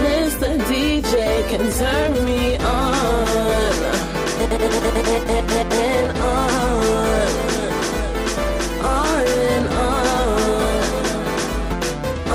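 At 11.71 to 11.74 s the sound jumps abruptly with a brief blip, likely a stream segment skipped; the waveform and spectrogram show a sharp discontinuity there.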